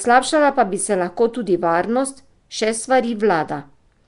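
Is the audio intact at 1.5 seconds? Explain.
No. At 1.5 seconds, as throughout, the speech sounds rough, hissy and smeared, with nothing above 10.6 kHz. This is likely Nellymoser compression, which starves weak bands of bits and fills them with noise.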